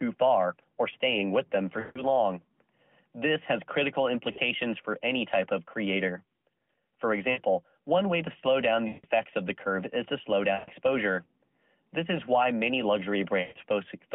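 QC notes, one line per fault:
1.80 to 13.59 s, lost AMR speech frames: six gaps at 1.80–2.06 s (after "staying with them for"), 4.32–4.38 s (between "has critical" and "for any type of"), 7.32–7.40 s, 8.88–9.06 s, 10.54–10.70 s (after "curve is to slow") and 13.42–13.59 s. Each gap is 40 to 160 ms, which fits runs of two to eight 20 ms frames. The decoder repeats the last good pitch and vocal-tract settings at falling gain, so the longer gaps smear into a drawn-out tone that fades to silence, and the shorter ones are a brief warble. Speech returns weak or rough for a moment after each gap, over the 200 Hz–3.4 kHz narrowband line.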